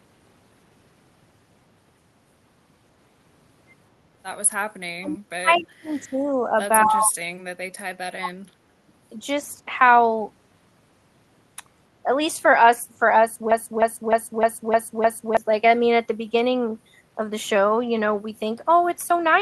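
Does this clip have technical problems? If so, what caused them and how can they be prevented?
Yes. Between 4.99 and 8.45 s the speech is suppressed in double talk: the level sinks at 4.99–6.36 s (deepest dip roughly 35 dB), 6.84–7.16 s, 7.54–7.61 s (both around 25 dB) and 8.16–8.45 s (near 40 dB). The likely cause is an echo canceller that could not tell the near talker from loudspeaker echo while both sides spoke, so it attenuated everything. Prevention: use a canceller with robust double-talk detection and gentler residual suppression.

At 5.56–5.63 s there is a brief echo leak, a faint scrap of the speech the far end played on its loudspeaker returning about 227 ms late and roughly 25 dB below the main speech. The likely cause is residual loudspeaker pickup that the far end's echo canceller failed to remove and sent back down the line. Prevention: the far end should use a headset or lower its speaker volume and keep its canceller's adaptation converged.

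From 13.52 to 15.37 s a broken-record loop plays: a 305 ms fragment repeats back to back six times, and the speech that belonged in that span is gone. The likely cause is a stalled player, encoder or stream that kept resending its last buffered fragment. Prevention: detect stalls and output silence or concealment instead of replaying stale buffer contents.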